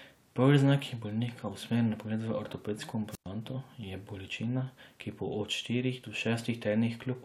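From 3.11 to 3.27 s, a wireless microphone squelch dropout: the FM signal fades, hiss rises briefly, the receiver mutes the speech for about 107 ms, then it returns.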